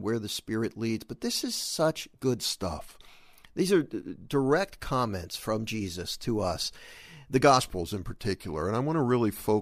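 In this speech clip, clock-matching software likely made a drift correction step twice, after "this is such good" (2.45 to 3.09 s) and after "to us the" (7.60 s to the end). Playback slows by about 6.4% and pitch drops about 115 cents, just over a semitone, each time, snapping back only after the first.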